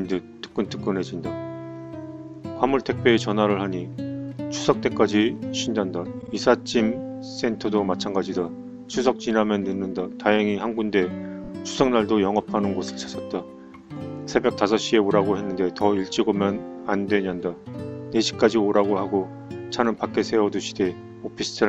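At 6.21 s a block of about 52 ms, which fits two compressed frames, plays twice more, adding about 104 ms. At 11.43 s a shorter block of about 26 ms, consistent with a single frame, also repeats twice, adding about 52 ms. These are repeated frames: the decoder receives the same frames again and plays them back to back, giving a rapid stutter. Unlike a dropout, nothing goes missing; the sound is lengthened.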